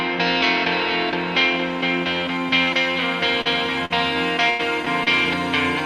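Brief smears or wobbles at 3.41–3.47, 4.85–4.88 and 5.04–5.08 s are short concealed packet loss: 20 to 40 ms never arrived, so the receiver extended the preceding sound over each hole. At 3.85–3.92 and 4.50–4.61 s the audio becomes a held, fading buzz or hiss and then jumps ahead. This is a burst of packet loss, with about 40 ms and 100 ms gone.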